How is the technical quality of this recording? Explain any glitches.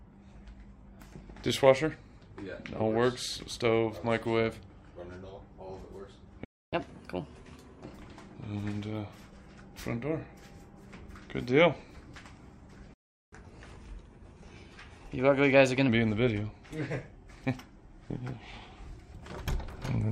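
The recording has two interruptions, each followed by a stretch of sped-up playback, so its timing and pitch are disturbed in two places.

Playback stall, at 6.45 to 6.73 s and again at 12.94 to 13.33 s: the sound cuts out mid-flow into silence for about 0.28 s the first time and 0.38 s the second. This is likely the player running out of buffered data or having its thread blocked. Output stays silent until it recovers, and the audio then resumes.

Catch-up at higher speed, at 6.73 to 7.84 s and at 13.33 to 15.89 s: straight after each stall, the player resamples its backlog to recover the lost time. Speed and pitch rise together. The first stretch runs at 1.25 times normal speed, raising pitch by about four semitones. The second runs at 1.15 times for a longer span, about two semitones up.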